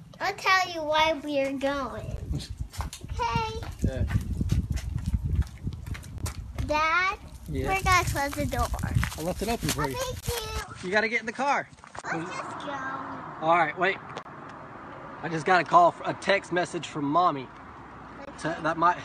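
At 2.17 s the sound drops out for about 16 ms. Similar gaps of about 23 ms follow at 6.18–6.21 s, 10.20–10.23 s, 14.23–14.25 s and 18.25–18.27 s, every 4 s. These are gaps at joins of encoded pieces. Each piece kept its encoder delay and end padding. The sound stops briefly, then resumes where it left off.

From 10.61 s to the end the character changes without a pause. Nothing remains above 9.1 kHz, so the sound turns duller. The level drops by a few decibels, and a new background noise sits well below it. The input was likely switched to a poorer device.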